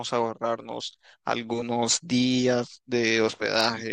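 A short speech recording with no technical fault to point to. Nothing at any moment calls for a time or a cause.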